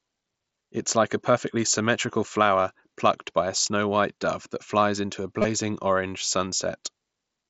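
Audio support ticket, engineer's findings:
Concealed Bluetooth headset packet loss, 5.42–5.44 s, right after "that flies into a". About 23 ms gap, which fits roughly three lost headset frames. Receiver filled the hole by repeating the best-matching recent waveform: brief buzzy sustained tone at full level, slight warble as real audio resumes. Suspect the headset-to-phone radio link. Wideband mSBC band limit to 8 kHz throughout.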